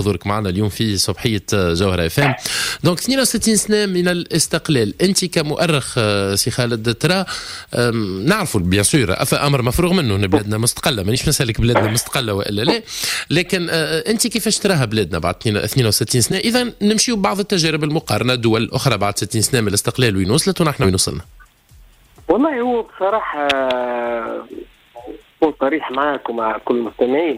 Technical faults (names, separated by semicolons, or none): compressed frames skipped